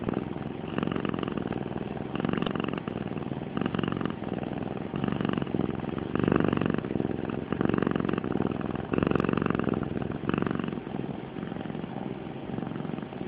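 Throughout, the sound is dull and granular, with upper bands flickering away. This is likely MP2 compression at a rate around 80 kbps, steady rather than bursty. From 2.35 to 2.48 s, DAB burbling adds a short burst of noise blips: bit errors of a fraction of a percent corrupt the sub-band data across what sounds like about eleven frames. Unlike the continuous codec dullness, it is a brief localised burst.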